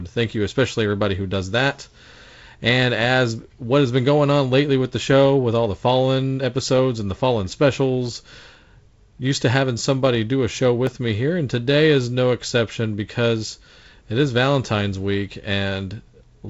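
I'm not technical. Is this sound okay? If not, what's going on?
No. At 10.87 seconds there is a block of digital silence. For less than a millisecond, the speech is replaced by silence. The sound stops dead and restarts with no fade, so you hear a tiny click or tick rather than a gap. This happens when the playback program is briefly late delivering the next chunk of sound and fills the hole with nothing. The telephone-style G.722 coding, which trims the highest treble, is not the problem.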